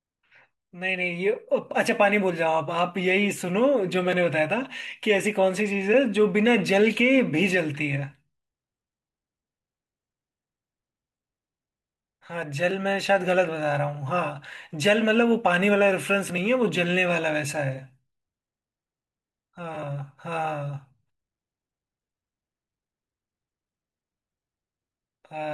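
No technical faults are audible.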